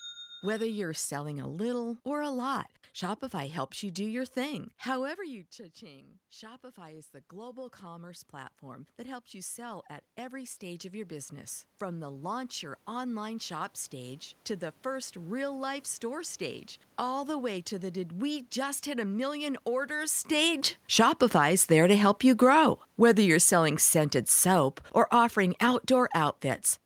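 From 5.16 s to 14.25 s, after "you do your thing", the speech drops about 17 dB as the talker moves back. Automatic gain rising then brings the level up about 14 dB until "to the first real". The room noise swells with the voice, so this is gain control and not the talker returning.

At 20.3 s, after "hit a million orders", the talker comes closer and the speech arrives loud. Automatic gain falling then pulls the level down about 9 dB until 26.45 s. Voice and room noise sink together, which tells a gain cut apart from the talker moving away.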